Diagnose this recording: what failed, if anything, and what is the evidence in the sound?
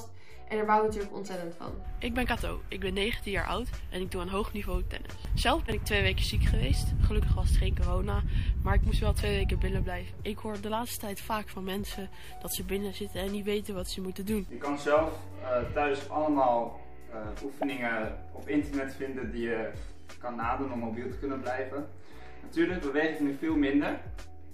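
The converter or analogue input stage is adding a constant DC offset, about -42 dBFS, across the whole recording. It is inaudible, but it shifts the waveform off zero, uses a little headroom, and appears as steady energy at the bottom of the spectrum.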